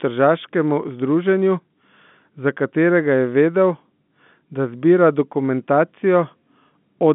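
Nothing stood out on listening; the speech comes through a narrow telephone band that tops out below about 3.8 kHz.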